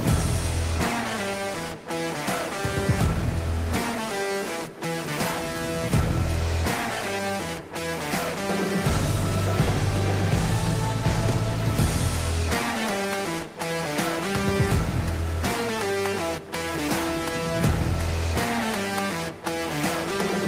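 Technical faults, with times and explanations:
Nothing wrong turns up here at all; there's no technical fault to flag anywhere in the clip.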